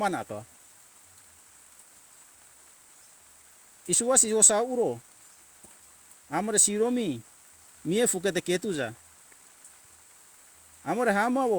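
No technical faults are audible anywhere in the recording.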